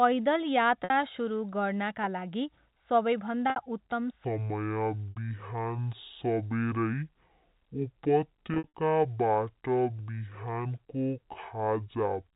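At 0.84 s, just before "सुरु गर्नाका", and again at 3.50 s, there is packet loss with pitch repetition. About 60 ms of audio is missing each time, which fits three 20 ms packets. The receiver covers each gap by looping the last pitch period and fading it, so the sound briefly holds on a buzzy, static tone. On a spectrogram the harmonics run flat and unchanging for that stretch. The waveform shows a short train of identical cycles shrinking in size.

From 4.24 s to the end, the section plays at the wrong speed, at 0.549 times normal. Speed and pitch drop together by roughly ten semitones, so the speech turns deep and dragging. The likely cause is playback or editing against the wrong clock. On a spectrogram the harmonics crowd closer together and sit lower, with the energy pulled toward the bottom of the 4 kHz telephone band. In the waveform every syllable is stretched to nearly twice its length.

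Inside that slowed section, two more losses occur. At 5.11 s another 60 ms gap is filled by a repeated, fading cycle. Between 8.54 and 8.73 s, losses totalling about 140 ms are spread over 200 ms, with the longest run 60 ms, which fits seven packets. They sound like a cluster of stuttering held buzzes, and the spectrogram shows several short flat-harmonic patches close together.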